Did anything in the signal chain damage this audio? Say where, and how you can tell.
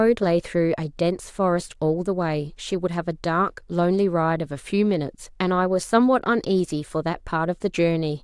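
No, nothing in this speech recording stood out as damage from any stage of the signal chain on listening.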